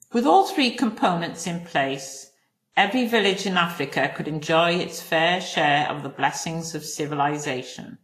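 Throughout the speech, nothing sounds above 14.2 kHz, and two kinds of compression damage sit on top of each other: a low-rate smearing, pointing to something like Vorbis at about 33 kbit/s, then a second coder's own swirl, likely from transcoding between lossy codecs, ending in WMA. A single codec would leave only one kind of artefact.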